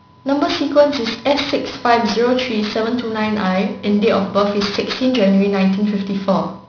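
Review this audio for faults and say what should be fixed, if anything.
Aliasing throughout: the 16 kHz to 11 kHz resample skipped low-pass filtering, so speech energy above 5.5 kHz folds back as gritty sibilance, roughly 15 dB down. Filter below 5.5 kHz before downsampling.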